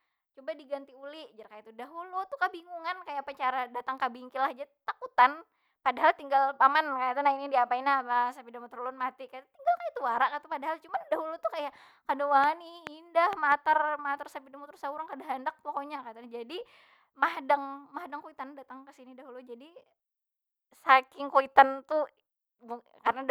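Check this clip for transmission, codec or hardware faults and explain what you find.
One fault stands out: a train of clicks between 12.44 and 13.53 s. About four sharp, near-identical ticks arrive at roughly 2.8 per second with uneven spacing, and they peak well above the speech. The likely cause is interference from nearby equipment or a struggling interface injecting pulses. The clicks keep the same shape and land regardless of what the speech is doing, even in gaps. Codec dropouts instead remove or smear the signal itself.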